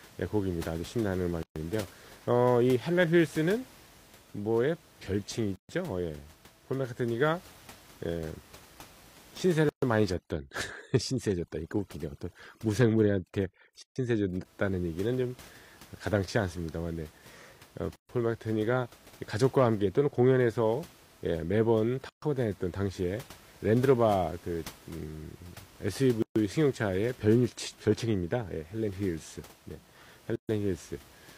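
Silent gaps open at 1.43, 5.56 and 9.69 s. Each is a gap at a join of encoded pieces, about 0.13 s long. Delay and padding stayed in at each join. From 10.13 to 14.45 s, overdone noise removal breaks the background up into twinkling specks. The same gaps continue every 4 s, at 13.82, 17.96, 22.09, 26.22 and 30.36 s.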